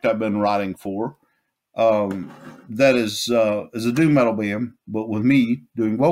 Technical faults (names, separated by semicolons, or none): none